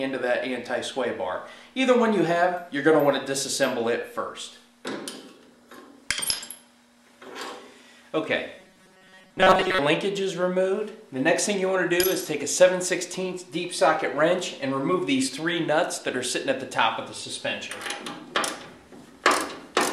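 From 8.59 to 9.79 s, new audio likely arrived too seldom, so playback looped a short buffer of about 5.3 ms, repeating it through most of that stretch and skipping real audio. This robotic sound from repeated short buffers leaves a rigid, metallic 188 Hz buzz.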